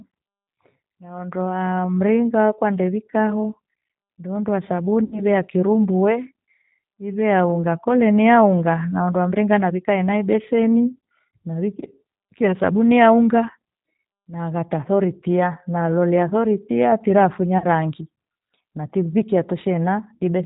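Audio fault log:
throughout: G.729 codec. The speech was coded with a model that rebuilds it from a vocal tract filter, a pitch predictor and a few pulses per frame, which fits an 8 kbit/s coder. Nothing above 4 kHz survives, so the speech sounds plainly rough and synthetic.
5.04–5.22 s and 17.58–17.65 s: VoIP packet loss concealed by the speech codec. About 80 ms went missing just before "ya kirumbu", which points to four lost packets, and 40 ms just after "nalolea sori tia tira", which points to two. The decoder filled each gap from its last pitch and filter, producing a fading stretched sound that leaves the sound weakened briefly afterward.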